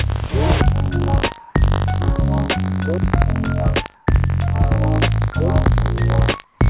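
A buffer tearing fault runs through the whole clip. A rough, robotic buzz sits at 50 Hz. It is there only while sound is present. The writer and reader of the playback buffer have slipped out of step. They cross once in every period. A small slice of each buffer still holds audio from roughly 70 ms earlier. Hard joins on both sides of that slice make the rattle. It also fits a buffer cycling 50 times a second.

From 1.40 to 1.55 s, the real background drops out for 150 ms. A smooth, featureless hiss takes its place. It is about 4 dB louder than the background around it. This is comfort noise in place of the background. Its likely cause is discontinuous transmission. The sender stopped sending during the pause. The receiver then filled the gap with synthetic noise of roughly the right shape.

At 1.53 s, the returning sound starts abruptly. Its soft beginning is missing. About 20 ms was lost to an onset clipped by the voice detector. 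The detector was likely slow to register the restart. So those first moments were never sent, and filler noise covered them.

The same swap happens at 3.95 to 4.07 s for 120 ms, with no level change. It happens again at 6.44 to 6.59 s for 150 ms, about 7 dB quieter. Each time, the background's detail turns flat and steady. All of this plays through a narrow call band with nothing above 4 kHz.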